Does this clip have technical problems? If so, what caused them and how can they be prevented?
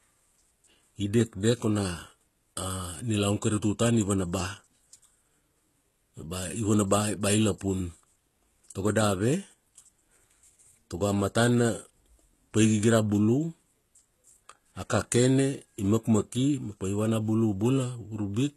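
Yes. The speech has plainly audible codec damage throughout: the top end stops dead around 12.3 kHz, and the s sounds come out gritty and metallic. That's likely HE-AAC compression, which fits a very low rate around 16 kbps. The treble is rebuilt by copying lower bands upward, so its harmonics don't line up with the real ones. To prevent it, encode at a higher bitrate or use plain AAC or a lossless format for speech like this.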